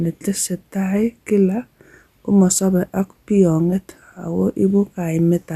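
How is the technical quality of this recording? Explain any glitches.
No glitches can be heard anywhere in this recording.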